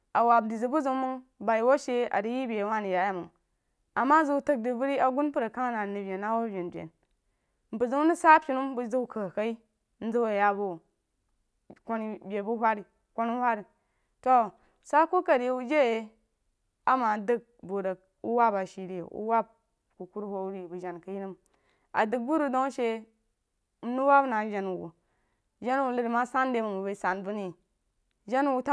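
Nothing technical stands out in this speech recording; there's no problem to point to at any moment, so there are no times or causes to give.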